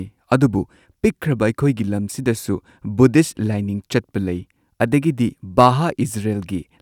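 No technical faults are audible.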